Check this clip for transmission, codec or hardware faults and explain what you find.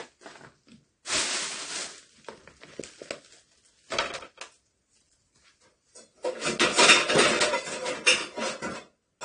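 There is one fault, present throughout: low-bitrate audio saved at a high bitrate. Nothing sounds above 9.7 kHz, and the dull sound and leftover coding artefacts point to a likely earlier low-bitrate AAC pass that the high-bitrate MP3 cannot restore.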